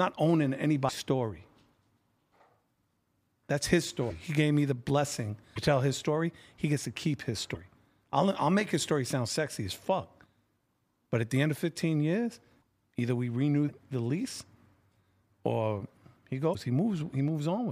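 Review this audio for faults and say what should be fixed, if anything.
Short glitches with a small jump forward in the speech occur at 0.88–0.91, 4.09–4.12, 5.55–5.58 (between "gave me the blessing" and "tell his story"), 7.54–7.57, 10.23–10.25, 12.61 (just before "either we renew"), 13.68–13.71 (between "either we renew" and "the lease") and 16.52–16.55 s. The likely cause is a broken MP3 bit reservoir. Frames of about 26 ms went missing, and the next frame drew its borrowed bits from the wrong bytes. A plain dropout would leave clean silence instead of garbled noise and a skip. To prevent it, cut or splice MP3 streams only with reservoir-aware tools, or decode before editing.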